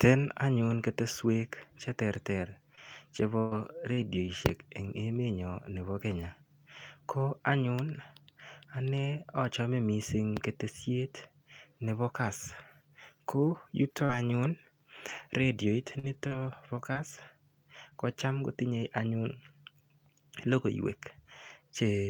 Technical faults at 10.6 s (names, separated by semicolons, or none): none